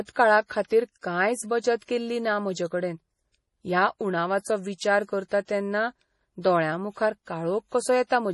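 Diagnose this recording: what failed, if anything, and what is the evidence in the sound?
The codec stage failed, most likely through MP3 compression. Across the whole speech recording nothing is present above 11.4 kHz, the hard ceiling a starved encoder imposes when it drops the treble band to save bits. The codec damage is heavy: sibilants turn watery and swirly because weak frequency lines are zeroed and then reappear from frame to frame. The depth of the band limit and the artefacts points to a bitrate around 32 kbps.

Pre-echo occurs at 0.46–0.50 s, 0.66–0.71 s, 1.85–1.89 s and 5.45–5.48 s. At each point a short hiss leads a sharp speech onset by 32 to 45 ms, and the attack itself sounds softened. The transform block containing each onset spreads quantisation noise sized for the loud attack across its full length, so the quiet moment just before the attack is filled with noise. This is also a codec-stage fault, a consequence of the same low-bitrate block coding.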